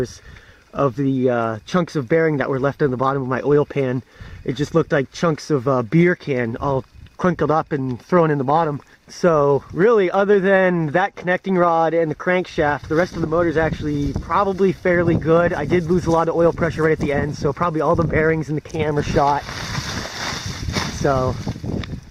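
No technical faults are audible anywhere in the audio.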